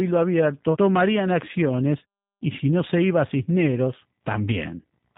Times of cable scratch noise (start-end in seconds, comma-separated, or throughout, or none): none